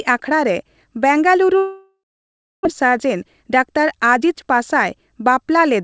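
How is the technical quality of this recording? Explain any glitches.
The recording has two clear glitches, both typical of a call received over a congested network; the audio passed through a G.722 call path, so nothing is heard above 8 kHz.

From 1.58 to 2.67 s there is a long network dropout, likely caused by a run of packets that never arrived. The receiver extended the last sound as a fading buzz or hiss, then gave way to near-silence for about 0.66 s. About 0.92 s of speech is lost outright before the audio resumes further on.

From 2.83 to 4.30 s a jitter buffer speed-up follows. Packets arriving late and bunched left the buffer too full, so the receiver trimmed short pitch-period slices repeatedly, roughly 150 ms in total. Speech runs about 8% fast at unchanged pitch and sounds hurried.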